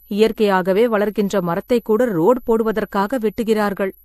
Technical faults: switching supply whistle; transcoding between lossy codecs

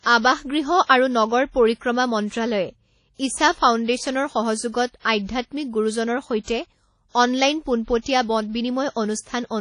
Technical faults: WMA compression

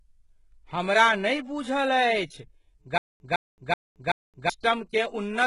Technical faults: HE-AAC compression; stutter with silent gaps

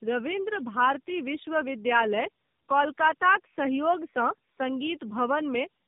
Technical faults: tandem speech coding

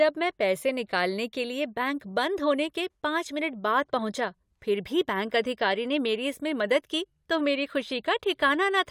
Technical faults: none

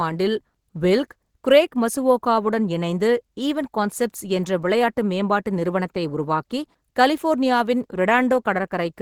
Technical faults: none

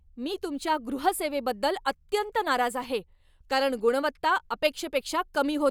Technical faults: none

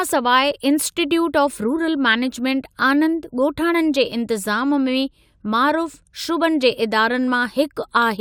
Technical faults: none

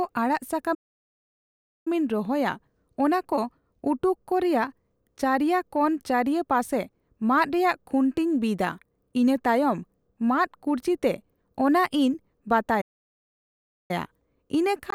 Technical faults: playback stall; input switched to a poorer device

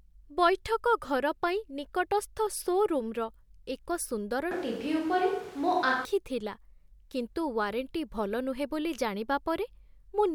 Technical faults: switch to a distant microphone

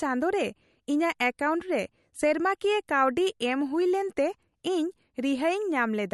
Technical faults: MP3 compression

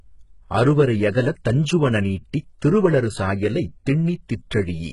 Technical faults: HE-AAC compression

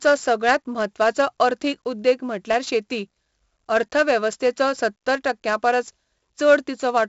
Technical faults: 4-bit ADPCM compression

